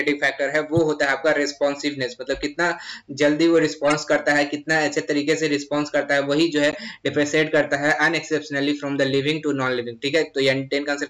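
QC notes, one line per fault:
0.77–0.79 s, 3.88–3.95 s and 6.71–6.75 s, corrupt frame decoded: damaged compressed frames were played anyway, spraying energy into wrong frequencies as short chirpy noise bursts, loudest at about -10 dBFS in the middle event. Unlike a dropout or click, each burst spans two to four frames of misplaced tone rather than a single tick.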